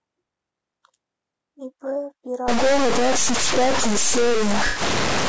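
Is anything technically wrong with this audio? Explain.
Yes, three faults can be heard in this speech clip.

Low-delay AAC compression runs throughout, most likely AAC-ELD at a low bitrate around 32 kbps. Its short frames give the encoder poor frequency resolution, so pitch harmonics are blurred, and at this bitrate there aren't enough bits to code them cleanly. The damage is plainly audible: the voice sounds rough and grainy, noise fills the gaps between harmonics, and the top band sounds dulled and synthetic.

A stuck bit starts at 2.48 s and lasts to the end. Most likely one data bit is held at a fixed value, which shifts roughly half the samples by that bit's weight in a pattern that follows the waveform. The result is distortion riding on the voice. Because the error also flips around zero, the quieter moments in this stretch fill with a constant noise bed.

AAC frame loss with concealment occurs from 4.67 to 4.81 s. 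Compressed frames went missing, and the decoder rebuilt the gap from the last good spectrum. The length fits roughly 90 ms of lost audio, about three frames. The reconstruction isn't the real signal, so this brief patch sounds smeared, noisy or phasey. It lands inside the stuck-bit stretch.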